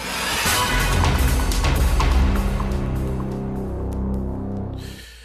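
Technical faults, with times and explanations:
1.78 to 1.80 s, corrupt frame decoded: a single compressed frame arrived with damaged bits, and the decoder played it anyway. Misread gains and codes put energy at the wrong frequencies for that frame, giving a brief chirp, squeak, blip or burst of noise peaking around -20 dBFS.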